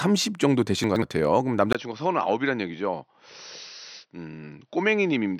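Chunks out of order, from 0.84 to 1.02 s: in this speech recording, a 60 ms piece of audio plays two chunks late, after the two pieces that should follow it. Nothing is missing, but the sequence is scrambled, so the moment sounds briefly jumbled, with three hard joins where mismatched waveforms meet. Input switched to a poorer device, at 1.73 s: after a 20 ms gap, the sound from that point to the end turns duller and boxier, with nothing above 6 kHz. The level drops by about 5 dB, and a faint new background noise sits well below the speech. The sudden narrowing of the band, the change in tone and the new noise floor are likely caused by the system moving its input to a different, lower-grade microphone or to a headset's call profile mid-recording.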